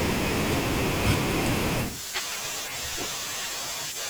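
At 2.2 to 2.36 s, a 40 ms chunk plays three chunks late. These chunks out of order leave a jumbled moment, with three hard joins.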